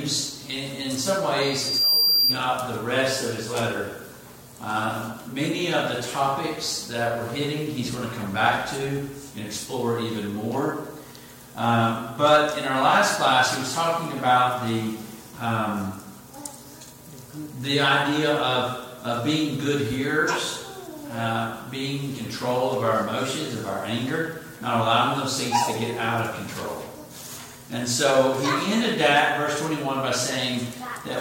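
Loudspeaker feedback squeal, 1.41 to 2.42 s: a 4.7 kHz tone swells over half a second, about 5 dB above the audio, as microphone–speaker loop gain exceeds one.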